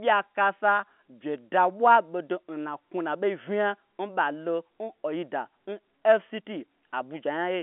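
There are no technical faults to describe in time order anywhere in this speech.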